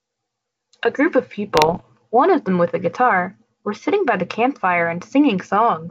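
From 1.54 to 1.82 s the speech breaks into pops and a rough, crackling burst, with the level jumping briefly up and down for about a quarter of a second. These are bit errors on an ADPCM link, here the G.722 path, which at 64 kbit/s otherwise carries clear wideband speech. A small share of the bits, under one percent, were flipped. Because ADPCM decodes each sample from the previous ones, every wrong bit also throws off the decoder's step size and predictor. Each error therefore rings on for some milliseconds instead of staying a single click.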